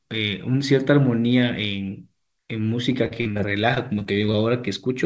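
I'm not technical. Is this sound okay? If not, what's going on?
No. From about 2.92 to 4.37 s the speech turns choppy and robotic. This is repeated packet loss (robotic sound): pieces of the call audio kept going missing, and each hole was patched by stretching the sound just before it. About a dozen such patches, none longer than roughly 42 ms, cover about a sixth of that stretch. One long dropout would leave a single silence; here many small repairs in quick succession give the choppy stutter. The call line also carries nothing above 8 kHz.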